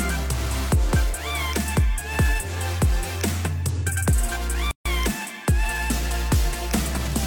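At 4.71 s a gap at a join of encoded pieces opens: a gap of about 144 ms, smeared edges, then sound resumes where it stopped, unlike a dropout losing material.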